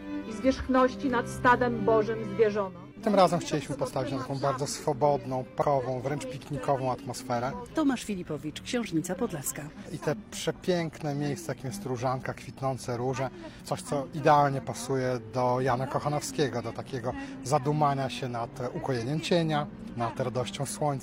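The audio has one instance of compressed frames skipped, between 5.58 and 5.62 s. At that point the sound jumps ahead. About a fifth of a second of audio never plays. The missing stretch matches a few whole frames of roughly 46 ms each. The frames were likely missing from the file or rejected by the decoder as damaged.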